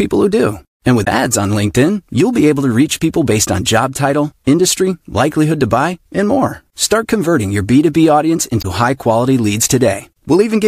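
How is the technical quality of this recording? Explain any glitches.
The recording has two brief glitches caused by damaged data in a compressed stream. The first runs from 1.01 to 1.08 s and the second from 8.58 to 8.65 s, each about 70 ms long. At each point, corrupted bytes in the encoded speech make the decoder misread or reject the affected frames and lose sync until it finds the next valid frame header. The result is a short chirp, squawk, click or hole that briefly replaces the speech.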